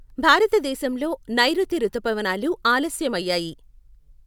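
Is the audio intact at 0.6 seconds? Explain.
Yes, the speech at 0.6 seconds is intact, with no audible fault at that moment.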